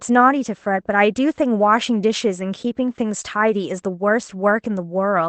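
No faults found in this speech; the call-codec path behaves as expected, its top end stopping around 8 kHz.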